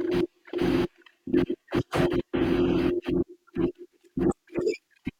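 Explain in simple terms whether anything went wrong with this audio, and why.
Nothing went wrong with this speech recording, because no technical fault can be heard anywhere in it. There is nothing here that needs fixing.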